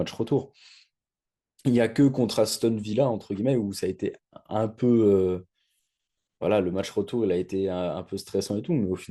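At 2.51 s the speech stutters briefly as a run of repeated frames plays twice. A 40 ms stretch of the compressed stream, which fits a pair of codec frames, was delivered again, so the decoder replays that same sliver and the clip runs 40 ms longer. Unlike a dropout, nothing goes missing. The sound doubles back on itself.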